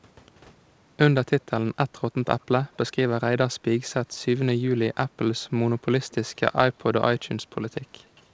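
At 2.41 to 2.45 s, 6.10 to 6.15 s and 8.05 to 8.22 s, a faint delayed copy of the speech comes back. This is echo leak. Each copy trails the original by 221 to 227 ms. The first is the weakest, about 40 dB below the speech. The second is clearly stronger. The last lasts longest. The likely cause is a loudspeaker at the far end whose echo canceller let some of its microphone pickup through. Nothing is heard above 8 kHz, which fits a G.722 call path.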